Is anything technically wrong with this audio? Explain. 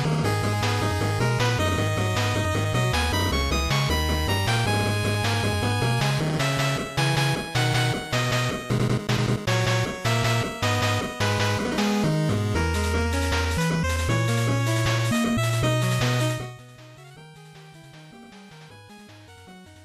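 No, nothing in this audio points to a technical problem. The level rises and falls smoothly, like a fader being moved, with no abrupt jumps.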